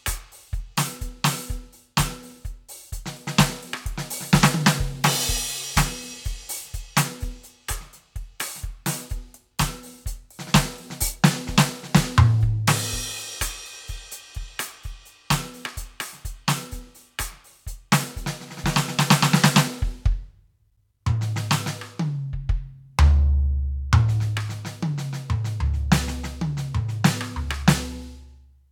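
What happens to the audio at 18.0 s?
At 18.0 s the music plays through intact, with no dropout, click or other fault at that moment.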